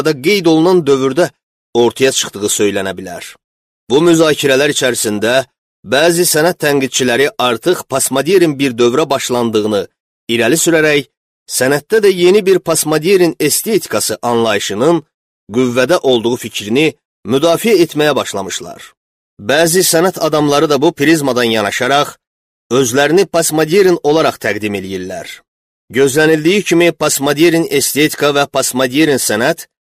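Hard clipping runs through the whole clip. The signal is driven about 4 dB past what one stage can pass, so the loudest peaks are cut flat. Only around one percent of samples are affected. The flattened tops add high harmonics, heard as crackle on peaks.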